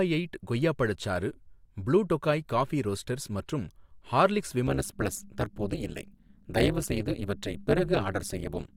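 From 4.67 s to the end, the speech takes on a harsh, metallic buzz around 200 Hz with level swings of about 60 dB. This is overlap-add ripple: frames were rejoined with overlapping windows whose gains don't sum evenly.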